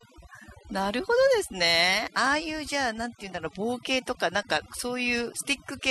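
From start to finish the speech carries overdone noise removal. A noise reducer was pushed too hard, so narrow frequency bands near its noise estimate are cut almost to nothing, taking the softer parts of the voice with them. The background drops away and breaks up into twinkling specks. A simple noise gate would mute everything at once, whereas here the cuts are band by band, which produces the sparkle.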